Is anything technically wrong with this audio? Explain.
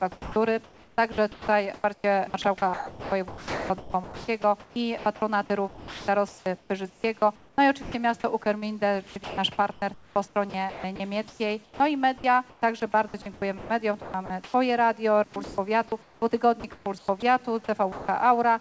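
Yes. Sound chopped by the voice detector runs from 0.12 to 14.54 s and again from 15.34 to 17.22 s. The likely cause is the sender's voice detector repeatedly deciding that quieter parts of the sound were background and pausing transmission. The receiver filled those gaps with synthetic comfort noise, about 5.7 s in the first stretch and 0.66 s in the second. The result is choppy audio with edges clipped off.

Sound dropped by the voice detector occurs at 17.92–18.08 s. Here the detector treated a quiet part of the sound as background and stopped sending, likely misjudging it as silence. For 160 ms the receiver played comfort noise, and about 100 ms of real sound was lost. That part of the audio gives way to steady noise or near silence before the signal returns. Throughout the clip, the call codec's band limit means nothing is heard above 8 kHz.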